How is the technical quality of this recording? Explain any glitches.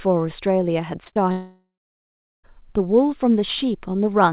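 The recording has two kinds of network fault, clustered between 1.04 and 2.45 s, and it is band-limited to 4 kHz, which fits a narrowband G.711 A-law call at 64 kbps.

Short concealed packet loss occurs three times in a row: 1.04 to 1.08 s, 1.08 to 1.14 s, and 1.14 to 1.18 s. Packets carrying about 20, 40 and 20 ms of audio arrived too late for the decoder. The receiver covered each gap by extending the preceding sound and then crossfaded back into the real signal. Because the gaps are back to back, they are heard as one smeared, wobbling stretch of speech.

A long network dropout follows from 1.32 to 2.45 s, with about 1.1 s of audio never played, likely because the stream stalled in transit. Concealment first continues the last sound as a fading buzz or hiss. Silence then takes over for roughly three quarters of a second. Speech resumes at 2.45 s with the missing portion gone rather than delayed, so the sentence jumps forward.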